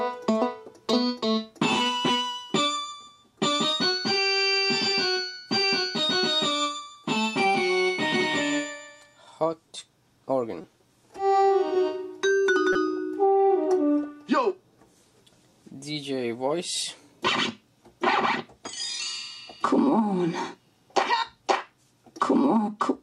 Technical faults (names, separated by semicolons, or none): corrupt frame decoded